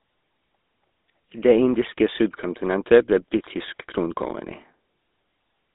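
Speech, and the whole thing has been through a GSM full-rate codec, the original GSM mobile phone coder. You get that gravelly, buzzy grain because the codec models the vocal tract and rebuilds the excitation from a sparse, regularly spaced pulse train, and that damage is plainly audible here. The band is squeezed to about 250 Hz to 3.7 kHz with nothing above 3.8 kHz, and the texture fits a 13 kbps phone link.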